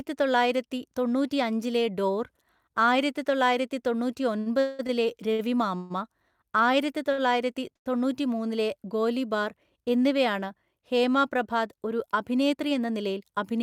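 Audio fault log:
4.39–5.92 s, repeated stalls (stutter): the speech drags and stutters, held or faded through five gaps totalling 466 ms, the longest 189 ms, about a third of the span. Packets arrived late, the jitter buffer kept emptying, and the receiver extended sound until audio resumed, losing nothing.
7.12 s and 7.76 s, short stall from a late packet: before "തൊണ്ണൂറ്റിമൂന്നിലെ ഗോലിബാർ എന്നിവയാണ് ഹേമ", a sound is held too long, by 58 ms then 98 ms, with a faint buzz or dip. Each packet came late, so the buffer ran dry and the last sound was stretched until it arrived.
12.53–13.30 s, jitter buffer speed-up: after "എന്നിവയാണ് ഹേമ പ്രഭാത് ഒരു", the speech sounds hurried, running at 110% speed while the pitch stays the same. The buffer had built up excess delay, so the receiver trimmed about a tenth of a second in small pitch-period slices.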